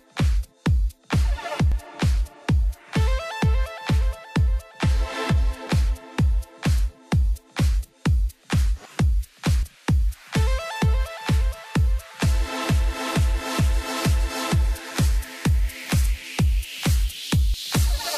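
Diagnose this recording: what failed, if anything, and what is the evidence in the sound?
Audio missing between chunks, likely at the driver or buffer stage, where a short piece is dropped each time a 4 s chunk closes. Skips fall at 1.72, 5.67, 9.63, 13.59 and 17.54 s, each losing about 40 ms. The waveform shows abrupt splices, and the spectrogram shows thin vertical seams.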